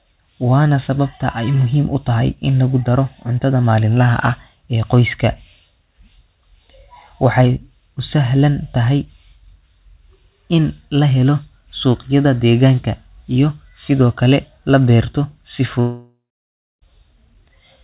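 From 15.8 s to 16.83 s the speech cuts out: a fading buzz continues the last sound, then about 0.63 s of silence, with 1.02 s of audio lost. This is likely a long network dropout. The buzz is band-limited at 4 kHz like the rest of the call audio.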